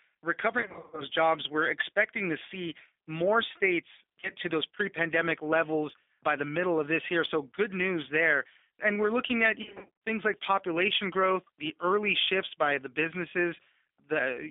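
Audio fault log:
throughout: G.729 codec. The audio is band-limited to roughly 250 Hz to 3.6 kHz and has the plainly audible roughness and slightly synthetic texture of a low-rate model-based coder. This fits 8 kbit/s G.729A, which rebuilds each frame from a pitch predictor, a vocal tract filter and a few pulses. On a spectrogram nothing appears above 3.6 kHz or below 250 Hz, and harmonics look smeared and blocky frame to frame.
0.61–1.03 s, 4.20–4.29 s, 9.62–9.90 s: VoIP packet loss concealed by the speech codec. In the first burst about 250 ms of audio is missing, scattered over about 360 ms. The third burst is about 280 ms scattered over about 400 ms. In both, no single gap exceeds 50 ms. The short event between "to see more states" and "to those pre pandemic" covers about 30 ms. After "we're looking at", the decoder extrapolates from its last pitch and filter with falling gain until "things like population growth". 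On the waveform, amplitude sags as the gain is lowered.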